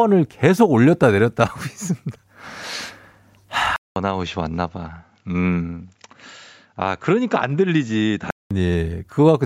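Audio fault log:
3.76–8.51 s, input switched to a poorer device: after a 200 ms silence the speech turns duller, with nothing above 7.6 kHz, drops about 5 dB and gains new background noise roughly 50 dB down, likely from recording moving to another microphone or a headset's call profile.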